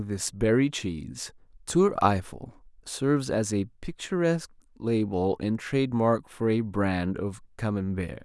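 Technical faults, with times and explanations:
No audible technical faults.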